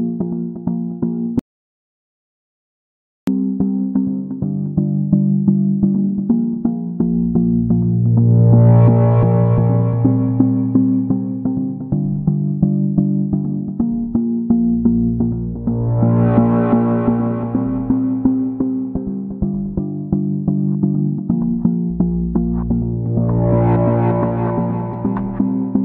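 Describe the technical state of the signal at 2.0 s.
At 2.0 s the signal is silent, no room tone at all, inside an audio dropout to silence running from 1.39 to 3.27 s, about 1.9 s lost. The likely cause is a lost input, with silence written in its place.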